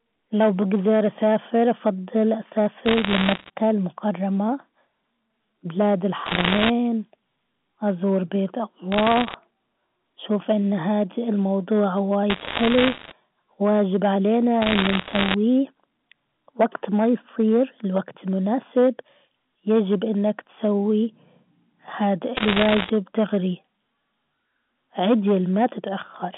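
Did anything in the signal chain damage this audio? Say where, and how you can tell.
Yes. Hard clipping runs through the whole speech clip: the level was pushed about 5 dB past what one gain or conversion stage could pass. A small share of samples, around one or two percent, have their peaks sliced flat, adding harsh upper harmonics heard as crackle on loud syllables.

Bit errors on a digital phone line show up in the transmission stage as bursts of sharp ticks at 2.86–3.50 s, 6.26–6.70 s, 8.92–9.34 s, 12.30–13.12 s, 14.62–15.34 s and 22.37–22.90 s. Flipped bits corrupt individual A-law samples at a rate of a few percent, heaviest around 6.3 s, over otherwise intact band-limited telephone speech.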